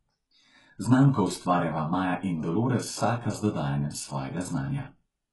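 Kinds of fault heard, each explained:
HE-AAC compression, throughout: treble likely rebuilt from copied lower bands at a very low bitrate; s sounds turn gritty and lispy, nothing above 11.5 kHz.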